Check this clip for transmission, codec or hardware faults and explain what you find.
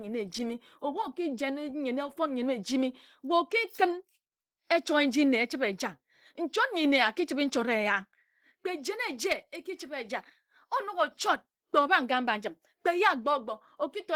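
One codec fault runs through the whole speech clip. It is most likely Opus compression. The roughness fits a low rate near 16 kbps in hybrid mode. The result sounds muffled, hoarse and grainy.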